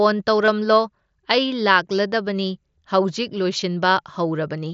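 At 0.46 to 0.48 s and again at 3.6 s, concealed Bluetooth headset packet loss: lost packets got patched with repeated recent waveform, leaving brief buzzy blips.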